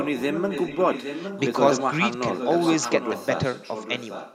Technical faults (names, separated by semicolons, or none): echo leak